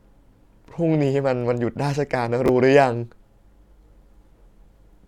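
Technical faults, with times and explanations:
2.46 to 2.49 s, chunks out of order: a 10 ms chunk of the speech plays two chunks late, after the audio meant to follow it. Nothing is lost, but the sequence is scrambled. Three hard joins produce a brief jumbled blip.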